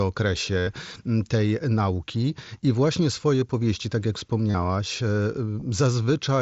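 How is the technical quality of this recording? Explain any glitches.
The recording has four short dropouts from concealed Bluetooth headset packet loss, carried over a wideband mSBC headset link that holds speech up to 8 kHz with light graininess. The longest, at 0.58–0.67 s, covers about 90 ms. That fits a run of lost 7.5 ms mSBC packets. The phone filled the gap by repeating the best-matching recent slice of waveform, so the gap sounds like a brief buzzy, steady-level tone with a small warble where the real speech resumes. On a spectrogram this shows as smeared, evenly spaced horizontal striping, and on a waveform as a flat-envelope repeating pattern.

Shorter hits fall at 3.40 s, between "tej nauki I właśnie" and "powieści tak jak", and at 5.60 s. Each is a two-packet masked blip of about 15 ms. At 4.51–4.54 s, just after "powieści tak jak", losses scatter over about 60 ms, with the longest run about 30 ms.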